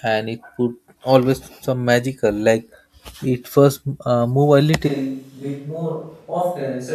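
From 4.89 s on, the speech turns suddenly roomy and thin, about 5 dB quieter with faint room noise, likely a switch to a distant microphone.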